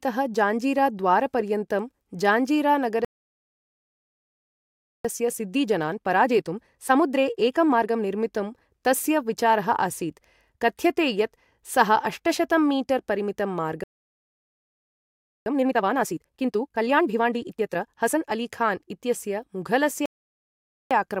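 At 3.05 s the speech cuts out in mid-flow and the output stays silent for 2.0 s, until 5.05 s: a playback stall, likely the player running short of buffered data or its output thread being blocked. Once playback resumes, the next 3 s, to 8.05 s, are hurried at about 1.25 times normal speed without any change in pitch. This is time-compressed catch-up: the player trims its backlog by dropping short segments and cross-fading across the joins.

The same pattern returns at 13.84 s, where a second stall silences the speech for 1.63 s. From 15.46 s to 18.46 s the catch-up runs harder, at 1.5 times speed, so the rushing is more obvious than in the first recovery.

A third stall begins at 20.06 s and lasts 0.85 s. From 20.91 s to the end of the clip, a milder catch-up at 1.1 times speed follows.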